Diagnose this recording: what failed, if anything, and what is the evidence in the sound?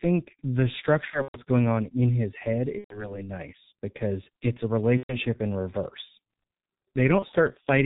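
The codec stage is the main culprit: the whole clip has that muffled, hoarse G.723.1 sound at around 6.3 kbit/s. Nothing comes through above 4 kHz, and the slow-updating voice model smears the consonants throughout, so the damage here is heavy.

On the network side there's VoIP packet loss concealed by the speech codec at 1.10–1.39 s, 2.78–3.19 s, 4.97–5.18 s and 7.19–7.26 s. The decoder stretches the last sound into a buzzy tone or a coloured noise that fades. The first gap is scattered, with a longest run of about 120 ms.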